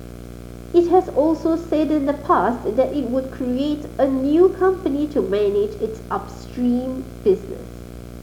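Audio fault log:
throughout, video or display buzz: a screen or video cable couples into the audio path, laying a 60 Hz field-rate buzz with hash roughly 15 dB under the speech.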